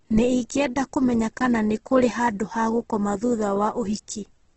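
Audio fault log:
Throughout: Opus compression, likely. Nothing is heard above 8.2 kHz, so the speech is band-limited. Voiced sounds turn grainy, rough and noisy, since starved bands are filled with noise or folded copies rather than left empty. Heavy damage fits a rate near 12 kbps.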